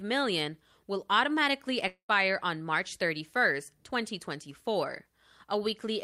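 From 1.87 to 2.11 s the speech breaks off in a long network dropout, likely from packets ceasing to arrive. The last sound smears into a fading buzz, goes silent for about 100 ms, and resumes with about 220 ms missing. Unlike a brief packet-loss glitch, the concealment audibly dies away.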